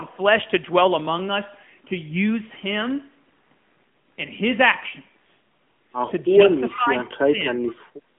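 From start to finish the speech passes through the AMR narrowband mobile codec. The band runs from about 150 Hz to 3.4 kHz, with nothing above 3.6 kHz. Its damage is plainly audible: the vocal tract model and sparse pulse excitation give the voice a buzzy, synthetic texture, which fits a mid-range rate of around 10 kbps. That coded texture is what separates it from a plain telephone band filter, which would narrow the sound without making it artificial.

From 6.71 to 7.42 s, roughly 0.7 s in all, the speech drops by about 25 dB at its deepest and then recovers. This is speech suppressed in double talk, likely caused by an echo canceller that could not tell this talker apart from loudspeaker echo and turned both down.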